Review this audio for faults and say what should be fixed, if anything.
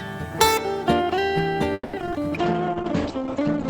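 From 1.73 to 2.14 s there's repeated packet loss, giving that choppy, robotic sound: four holes, the longest 200 ms, patched by stretching the previous sound, and some pieces simply missing.

A call bitrate drop kicks in at 2.38 s and runs to the end. The encoder had to work with far fewer bits, so the sound turns rough and watery, and the top end is cut off above about 8 kHz where it had been reaching 20 kHz. The sound points to the rate falling from around 32 kbps to about 9 kbps.

Overlapping that, from 2.69 to 3.24 s, there's a jitter buffer slow-down. The receiver repeated tiny slices of audio to rebuild its reserve, adding 54 ms, so playback runs at 91% speed with the pitch unchanged and sounds slightly drawn out.

To prevent these, add FEC or redundancy to the network path, give the bandwidth estimator more headroom so it doesn't collapse the bitrate, and keep a steadier jitter buffer target.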